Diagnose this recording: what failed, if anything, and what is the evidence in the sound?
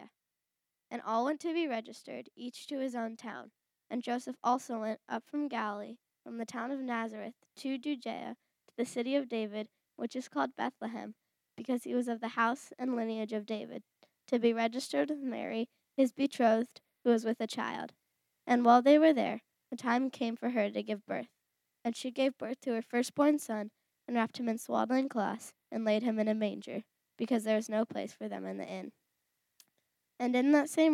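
Nothing failed: no stage in the chain, from analogue wiring and conversion through buffering, processing, transmission, storage and playback, leaves an audible fault anywhere in the recording.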